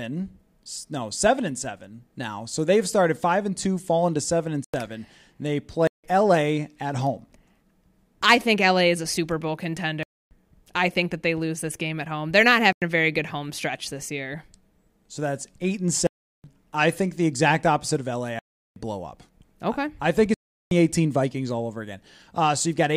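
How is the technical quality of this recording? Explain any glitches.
The speech is repeatedly interrupted by seven blocks of digital silence: 4.64–4.74 s, 5.87–6.04 s, 10.03–10.31 s, 12.73–12.82 s, 16.07–16.44 s, 18.39–18.76 s and 20.34–20.71 s, lasting from 93 ms to 372 ms. Each drops abruptly to silence and back with no fade. The 93 ms and 372 ms holes fit 4096- and 16384-sample output buffers left unfilled in time.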